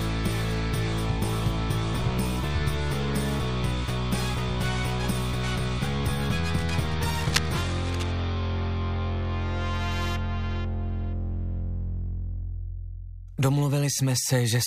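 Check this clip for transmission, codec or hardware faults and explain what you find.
One hardware fault stands out: cable scratch noise from 6.58 to 8.14 s, lasting about 1.6 s. A burst of dense, irregular scratching and rustling sits over the sound, only around 10 dB below it. The likely cause is a worn cable, connector or control being moved, so its contact resistance jumps around rapidly and injects ragged noise. On a waveform it appears as a stretch of jagged, uneven spikes. On a spectrogram it shows as broadband, patchy vertical streaks across the whole band.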